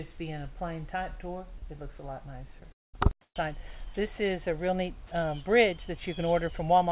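At 2.6 s the sound is briefly replaced by a flat hiss for about 20 ms, with roughly 10 ms of the actual sound missing. This is sound dropped by the voice detector, likely because the sender's detector treated a quiet moment as background and stopped transmitting for an instant. The receiver filled the gap with comfort noise, so the sound gives way to steady noise and returns when the detector triggers again.

From 2.72 to 2.95 s there is a long network dropout. About 220 ms of audio never arrives. The receiver likely extended the last received sound as a brief fading buzz, but most of the stretch, about 200 ms, is plain silence. The sound then resumes further along, without the lost portion. The gap falls within band-limited telephone-style sound, which has nothing above 4 kHz, consistent with a G.711 A-law codec at 64 kbps.

Between 3.21 and 3.35 s, about 140 ms of the background is swapped for comfort noise in place of the background. 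The real background, which sits about 50 dB below the loud parts, changes level by about 35 dB and becomes a smooth, featureless noise. The likely cause is discontinuous transmission: the sender paused while it heard no speech, and the receiver synthesised a rough approximation of the background until sound returned.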